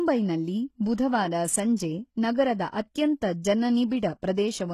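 Right from the start the whole speech clip has that synthetic, gritty top end you get from HE-AAC compression at a low bitrate, likely something around 16 kbps. The codec keeps only the lower spectrum properly and fakes the treble by copying lower bands upward under a rough envelope, so the highs don't line up with the real harmonics. The damage is plainly audible: s sounds come out lispy and metallic, and nothing at all survives above 12.3 kHz.

At 1.76 s there's a pre-echo. A sharp attack lands late in a transform block, and the quantisation noise spread across that block smears into the quiet moment just before it, about 18 ms of it. You hear a brief hiss leading into the onset, and the attack itself comes across softened and blurred rather than crisp.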